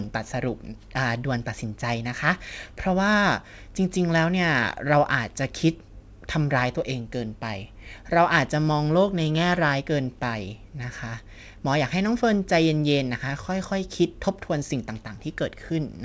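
Nothing goes wrong anywhere in this speech, which simply comes through as a wideband call would, with the usual coding texture and nothing above 8 kHz, in keeping with a G.722-style call codec and jitter buffer doing their normal job.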